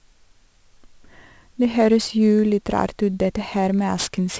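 Speech throughout, with aliasing across the whole clip: sibilants turn gritty and metallic, and energy runs hard up to 8 kHz, which points to a drop from 44.1 kHz to 16 kHz without an anti-alias filter. Content folded back sits roughly 20 dB below the speech. A clean low-pass would only sound duller, not harsh.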